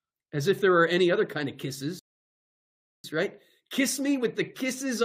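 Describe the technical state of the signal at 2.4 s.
At 2.4 s the speech has stopped dead and there is only silence, from 1.99 s to 3.04 s, right after "any other kind of". When it returns, it picks up at exactly the point where it broke off, with nothing skipped. This is a rebuffering stall: the player exhausted its downloaded audio and waited for more data before continuing, so no content is lost but about 1.05 s of dead air is inserted.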